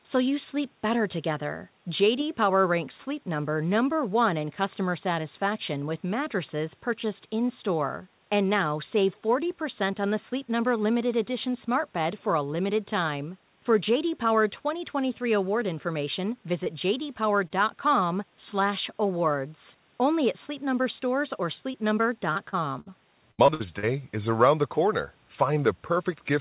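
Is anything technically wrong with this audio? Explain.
Yes. Packet loss damages the speech in several places, getting worse toward the end. The call path is band-limited, with nothing above 4 kHz, which fits narrowband G.711 mu-law.

Short concealed packet loss at 16.64 s, 17.48 s, 21.72 s, 22.33 s and 22.49 s: each is a brief smear or wobble in the speech. Around 20 ms of audio went missing in each, and 40 ms at 22.49 s. The receiver covered each hole by extending the preceding sound, then blended back into the real signal.

Burst of packet loss from 22.80 to 22.92 s: the speech briefly turns into a held buzz or fading hiss, then resumes a little further on. About 60 ms in a row failed to arrive in time, so the receiver kept stretching and fading the last sound, skipping the lost portion.

Repeated packet loss (robotic sound) from 23.31 to 23.85 s: the speech becomes choppy. Five separate gaps, the longest 72 ms, cover roughly 38% of this stretch. 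Each patch of continued sound ends only shortly before the next gap, leaving pieces missing throughout.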